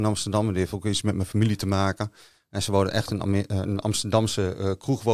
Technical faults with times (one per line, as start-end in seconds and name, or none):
none